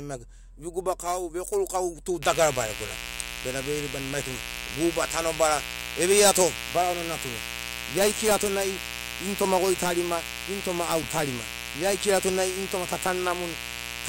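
Unshielded wiring or a switching component such as a dimmer or rectifier has let sharp spikes from a 60 Hz mains supply into the speech recording, two per cycle, from 2.23 s to the end. The result is mains buzz: a steady, raspy drone whose harmonics stack up from 60 Hz into the kilohertz range. It sits about 10 dB below the speech.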